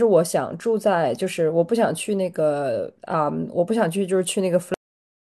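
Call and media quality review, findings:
Cut-off end at 4.74 s: speech stops abruptly mid-sound, then flat digital silence to the end, with no decay or tail. Probable component: capture or output buffering at stream close. The final buffers were never written or played out, so the audio truncates instead of finishing.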